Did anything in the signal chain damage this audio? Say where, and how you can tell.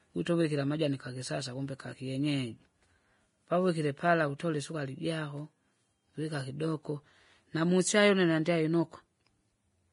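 Yes. The damage is at the codec stage, throughout. The speech has nothing above 10.5 kHz, though the file is a high-rate MP3. This is likely low-bitrate audio saved at a high bitrate. An earlier coarse encode removed the top band. Re-encoding cannot restore it.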